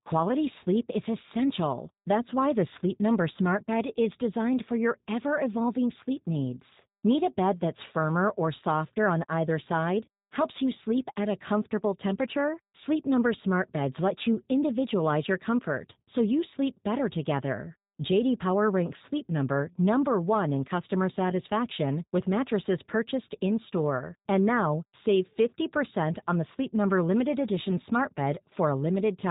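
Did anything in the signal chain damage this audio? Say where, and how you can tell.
Yes, at the codec stage: the speech carries G.729 codec damage throughout. Nothing passes above about 3.8 kHz, and the voice sounds plainly rough and synthetic, which fits an 8 kbit/s G.729A link. The codec never sends the waveform itself. In each 10 ms frame it sends a vocal tract filter, a pitch predictor and a few pulses, and the decoder rebuilds speech from those, so fine detail is replaced by a coarse approximation.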